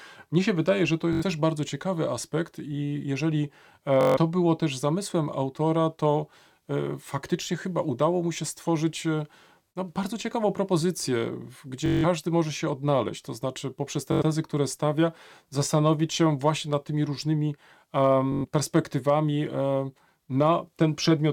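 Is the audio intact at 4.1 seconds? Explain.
No. From 4.01 to 4.17 s the wireless link lost or delayed packets, and the receiver replayed its last short buffer until fresh data arrived. This Bluetooth stutter sounds like a rapid machine-gun buzz, after which the speech jumps ahead roughly 150 ms.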